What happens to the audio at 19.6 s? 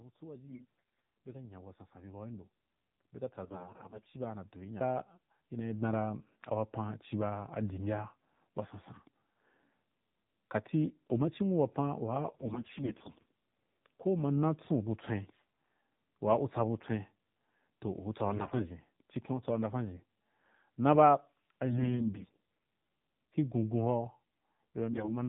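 At 19.6 s the speech sounds muffled and buzzy, with nothing above 4 kHz, and this persists through the whole clip. It comes from the AMR narrowband mobile codec, whose vocal-tract model at a low rate, consistent with the 7.4 kbps mode, leaves plainly audible synthetic damage.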